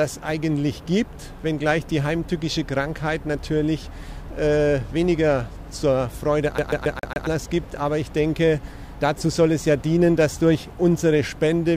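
From 6.58 to 7.27 s the sound catches in a CD stuck on one turn: a 138 ms slice repeats five times, each with a brief mute at the jump. The mute and the perfectly even rate distinguish it from a streaming dropout's irregular gaps.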